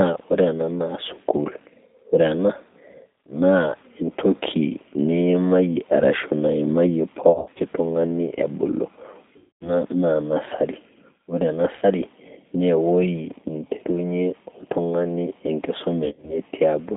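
The whole clip of speech runs through a G.729 codec at 8 kbit/s, and you can plainly hear it. The line is squeezed to roughly 150 Hz to 3.7 kHz, so there's no air on top. The voice is being rebuilt from a vocal tract filter, a pitch predictor and a handful of pulses per frame, which gives it that slightly rough, synthetic edge.

On top of that there's VoIP packet loss concealed by the speech codec, in four spots. From 7.30 to 7.61 s the dropouts are scattered across about 300 ms, the longest gap being about 40 ms. The sound points to around 170 ms of audio going missing in that stretch. Each time, the decoder papers over the hole by repeating its last pitch and filter at falling gain, so you get brief smears. The second one, 9.37 to 9.74 s, is heavier, with roughly 240 ms lost. You hear a stretched sound that fades out just before "naa nursery ore", and the voice stays a bit weak as it recovers, since each frame leans on the one before. 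Right after "naa nursery ore", at 11.76 to 11.85 s, there's a short 60 ms gap, just a quick blip. The last is 16.05 to 16.39 s, with losses scattered over about 240 ms and a longest run near 60 ms. It sounds stretched there before the signal settles.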